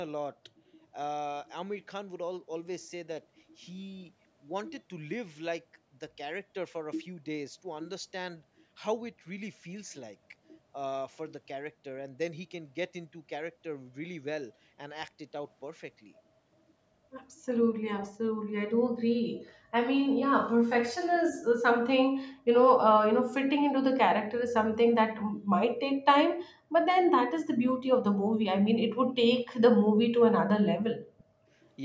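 A speech recording carried over a call, with a brief echo leak from 31.18 to 31.24 s: a faint delayed copy of the voice, very quiet at roughly 35 dB below the direct speech, arriving about 0.36 s after the original. The likely cause is a loudspeaker on one side of the call whose echo canceller let a scrap of its own microphone pickup through. Unlike room reverberation, which smears a decaying tail onto every word, this is a discrete, late, isolated repeat. The audio stops at 8 kHz, as call microphone processing would leave it.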